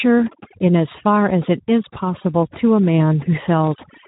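From start to end the speech carries overdone noise removal. The noise reducer was pushed far too hard, so it cuts individual frequency bands whenever they sit near its noise estimate, taking quieter parts of the speech with them. Between phrases the background drops to near silence with twinkling specks. On a spectrogram the gaps are dark, sprinkled with isolated dots, and the speech shows ragged, patchy harmonics.

Running alongside it for the whole clip is Speex codec damage, plainly audible. This CELP speech codec, at a rate that fits roughly 11 kbps, has too few bits to rebuild the excitation faithfully, leaving the speech noisy and hoarse. On a spectrogram the energy stops flat at 3.8 kHz with nothing above it, and the harmonic lines below look smeared and grainy rather than clean.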